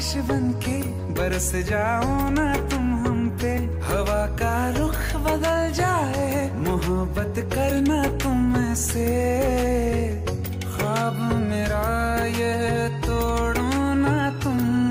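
Nothing goes wrong anywhere in this clip, so there's no technical fault to point to at any moment along the way.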